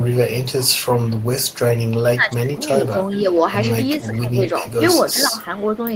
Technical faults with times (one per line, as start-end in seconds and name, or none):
0.00-0.08 echo leak
0.44-1.91 echo leak
2.04-3.26 speech suppressed in double talk
2.85-3.21 echo leak
3.96-4.79 speech suppressed in double talk
5.13-5.81 speech suppressed in double talk
5.61-5.65 echo leak